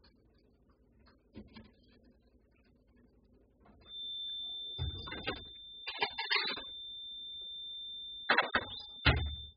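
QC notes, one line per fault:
throughout: AAC compression. The whole clip sounds dull and smeared, with nothing at all above 5 kHz, so the top end is simply missing. Sustained sounds take on a warbling, fizzy texture where the coder has left gaps in the spectrum or filled them with substitute noise. The heavy damage and the low cut-off fit an AAC-LC encode at a very low bitrate, around 8 kbps, which is the likely cause.
3.82 to 9.57 s: feedback whistle. From 3.82 s to the end, a thin, steady tone at 3.6 kHz rings behind the sound, sitting roughly 10 dB below it and swelling and fading slowly in level without building up. This is likely a loudspeaker-to-microphone loop held just at the edge of feedback, so that one frequency keeps sustaining on its own instead of growing into a full howl.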